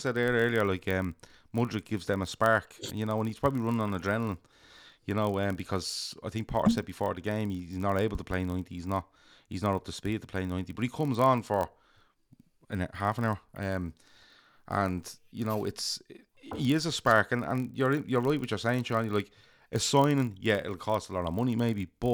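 Speech, with a block size mismatch (padded) throughout. A buzz at about 43.1 Hz runs under the whole clip. That fits a stage reading 1024-sample blocks and zero-filling each one's short tail. Playback runs at 0.999 times normal speed.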